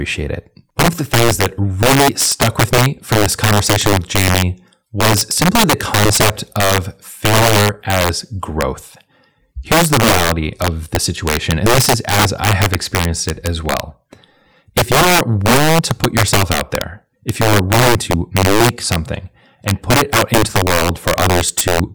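Integer overflow runs through the whole speech clip. The signal is pushed about 8 dB past the largest value the integer format can hold, and instead of being limited at that ceiling, each sample that exceeds it wraps around to the opposite extreme. Only a small share of samples, roughly 3 percent, cross the limit, but every one of them jumps across the full range, so the loudest speech peaks break into violent, sharp cracks far harsher than ordinary clipping.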